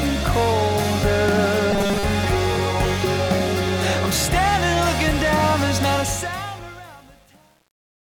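From 1.71 to 2.04 s the sound turns into a rigid, metallic buzz fixed at 200 Hz: robotic sound from repeated short buffers. The likely cause is a starved playback stream replaying its last few milliseconds, which fits a 5 ms buffer, in place of most of the real audio. Unlike a plain dropout, there is no gap, only a locked pitch that loosely tracks the material.

From 5.93 s to the end at 8.08 s, truncation distortion on a fade sets in as the level falls. The fade stage keeps about 8 bits with no dither, so the waveform collapses into coarse steps. From 6.37 s onward the tail turns gritty. This is different from a codec artefact because the damage grows as the level drops.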